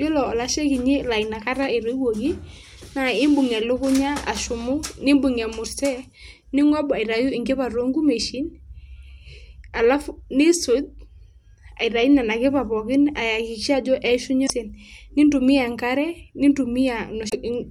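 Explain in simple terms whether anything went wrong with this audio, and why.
Damaged data in a compressed stream: the decoder hit corrupted bytes and lost its place, producing brief glitchy blips at 14.43–14.50 s and 17.26–17.34 s.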